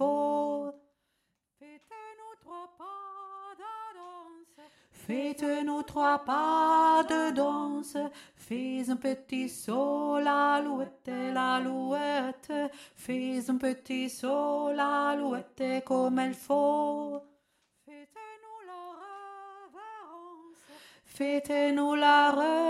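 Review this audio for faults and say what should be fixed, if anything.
No technical faults can be heard anywhere in this audio. Nothing needs fixing.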